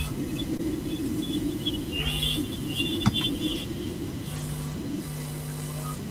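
Speech, with two brief rough, noisy patches at 0.53 to 0.55 s and 4.36 to 4.42 s but no gaps. These are lost packets rebuilt from error correction: the following packets carried low-bitrate copies, which the decoder played in place of about 20 ms and 40 ms of audio. At 0.57 to 0.61 s a short smear follows, a short concealed packet loss. Roughly 20 ms never arrived in time, so the receiver extended the preceding sound to cover the hole before blending back into the real signal.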